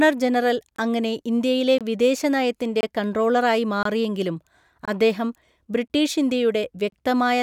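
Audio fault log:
0.76, 1.78, 2.81, 3.83, 4.85, 5.88 and 6.90 s: gap between chunks. 23 ms holes after every 1 s chunk, nothing lost, just silence at each join.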